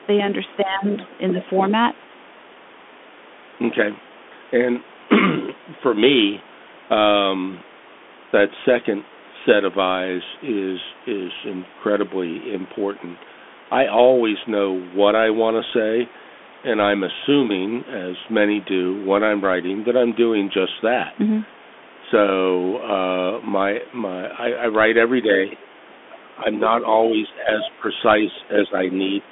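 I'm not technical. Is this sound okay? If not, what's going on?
No. Three separate problems can be heard in this speech.

The first lasts the whole clip: a Bluetooth CVSD headset codec, the basic format older headsets use for calls. It cuts away everything above about 3.8 kHz and most of the deep bass, so the voice sounds thin and boxed-in, like an old phone line. The damage is plain: s sounds turn scratchy, and a fine grainy hiss sits underneath. Unlike the other two faults, it never comes and goes.

The second is speech suppressed in double talk. The voice briefly sinks or thins out at 0.63 to 0.87 s, 26.04 to 26.47 s, 27.1 to 27.88 s, 28.48 to 28.76 s and 29.23 to 29.28 s. The dip at 26.04 to 26.47 s is the deepest. The likely cause is both people talking at once. The call's echo-removal system couldn't tell the talker apart from the other person's voice coming out of the speaker, so it turned everything down. 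What you hear is the talker's own voice going missing, not an extra voice appearing.

The third is the other side's voice leaking through. A faint second voice, well below the main one, slips in at 0.92 to 1.08 s, 1.41 to 1.71 s and 25.51 to 25.58 s. This is likely the far end's voice playing from the loudspeaker and being picked up again by the microphone, because the echo removal missed it. Here something is added, where the second fault takes something away.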